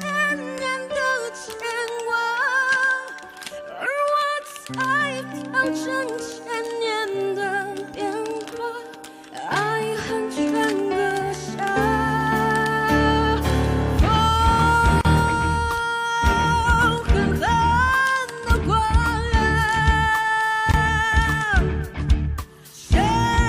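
At 15.01 to 15.05 s the sound drops out for 37 ms. At 20.71 to 20.74 s it drops out again for 23.5 ms. These are gaps at joins of encoded pieces. Encoder delay and end-frame padding stayed in, leaving short silences with smeared edges. The sound then carries on from where it stopped.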